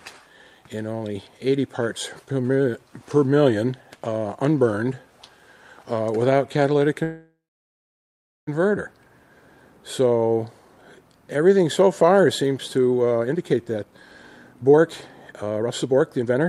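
From 7.03 to 8.49 s the sound stops and the last moment is stretched into a fading buzz or hiss that sinks to silence for about 1.1 s, then resumes where it left off. This call audio freeze likely came from delayed packets draining the jitter buffer, adding roughly 1.44 s of delay.

Jitter buffer speed-up then follows at 13.17 to 13.93 s (136% speed), 14.55 to 14.83 s (140%) and 15.32 to 16.49 s (140%). The audio sounds hurried but keeps its pitch, because the receiver cut out short pitch-period slices, about a third of a second, a tenth and half a second, to shed the built-up backlog.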